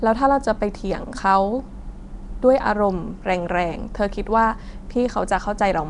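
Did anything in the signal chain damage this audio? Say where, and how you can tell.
Yes, at the codec stage. Across the whole clip the speech carries a rough, hissy halo and a smeared, underwater quality, and nothing is present above about 10.6 kHz. This is likely Nellymoser compression, the Flash-era Nellymoser Asao codec. It spends a fixed two bits per sample on short blocks, so weak bands get no bits and are filled with noise, producing the hiss and smearing. The damage is plainly audible and fits a bitrate around 44 kbps.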